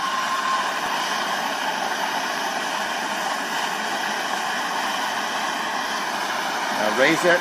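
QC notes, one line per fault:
0.86–6.86 s, periodic USB or driver dropouts: about seven short ticks, one each second, where roughly a millisecond of audio drops to silence, likely because the USB bus or driver is stalled on a fixed schedule. Each abrupt cut and restart makes a click heard only over signal. The waveform shows hairline gaps of near-silence at 1.0 s spacing. The spectrogram shows matching thin vertical broadband stripes.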